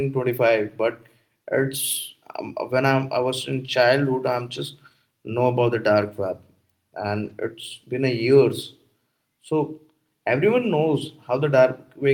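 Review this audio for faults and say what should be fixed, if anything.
Lost packets rebuilt from error correction at 6.01–6.07 s, right after "know about the", and again at 7.25–7.31 s. Each time about 40 ms of speech, which fits two lost packets, was played from low-bitrate backup copies. That avoids a gap but sounds rougher and noisier. On a spectrogram each spot shows as a short, smeared, grainier patch, and the waveform stays continuous with no dropout. Reducing packet loss on the network path would prevent it.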